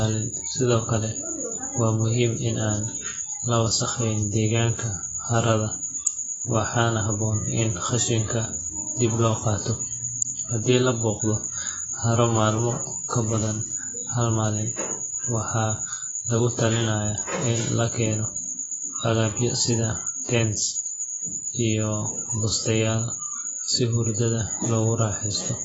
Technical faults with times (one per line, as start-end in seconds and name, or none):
0.00-25.64 AAC compression